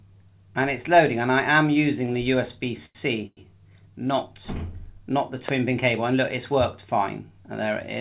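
Short stalls from late packets occur at 2.06 s and from 2.86 to 2.97 s. A packet arrived after its playout time, the jitter buffer ran dry, and the receiver stretched the last bit of sound to cover the wait. The first hold lasts about 17 ms and the second about 91 ms, and then playback resumes from the same point, so nothing is lost and the sound just lingers with a faint buzz or dip. A call audio freeze follows from 3.27 to 3.39 s: the sound stops, a fading continuation fills about 100 ms, and roughly 40 ms of that is silent before the audio picks up where it left off. The likely cause is packets held up in transit long enough to empty the jitter buffer, so this is a gap inserted into the audio rather than a dropout, and the stream ends up about 100 ms later than before. A loud pop lands at 5.49 to 5.51 s, a single sharp click about 15 dB above the surrounding level, with the sound continuing beneath it. 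It is most likely a sudden voltage step or spike from a plug, switch, static discharge or driver glitch, briefly shaped by the downstream circuitry. The whole clip also sits inside a narrow band with nothing above 4 kHz, which fits a G.711 A-law call path at 64 kbps.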